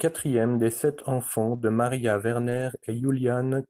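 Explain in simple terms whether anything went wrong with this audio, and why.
Yes, two kinds of network fault can be heard in this speech.

Lost packet rebuilt from error correction: right after "des sept", at 1.53 s, and again from 2.41 to 2.63 s, chunks of the call went missing. The decoder replaced each one with a lower-quality backup copy sent in the next packet, so the sound never drops out but turns rougher and noisier.

Short concealed packet loss: from 1.57 to 1.61 s, about 20 ms of audio arrived too late to be played. The receiver filled the hole by stretching the preceding sound and then blending back into the real signal. This leaves a brief smear or wobble.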